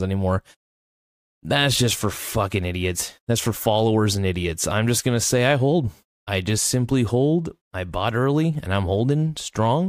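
No technical faults can be heard at any point in this speech recording.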